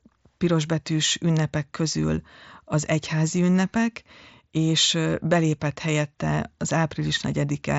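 Nothing goes wrong at any point in this speech; it comes through a Bluetooth mSBC headset codec, so there's simply no content above about 7.7 kHz, which is what that wideband link gives you.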